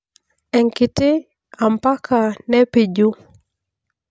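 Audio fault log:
No faults can be heard in this speech recording. There is nothing to log.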